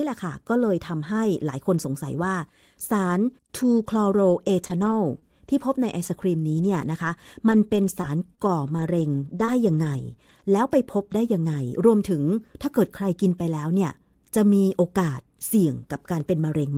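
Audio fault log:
4.29–10.41 s, scattered short gaps: about seven lost or late packets, each under roughly 20 ms, patched by extending preceding sound, leaving brief ticks and smears.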